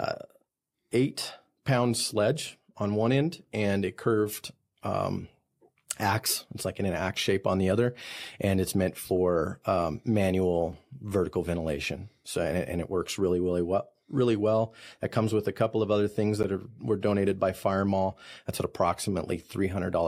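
At 10.73 s, just before "vertical ventilation", there is a sharp tick, and at 16.43 s, between "couple of other things" and "are were donated by", a longer pop. Both are blocks of digital silence: the audio drops abruptly to silence for about 3 ms and 12 ms. These gaps fit unfilled 128-sample and 512-sample output buffers.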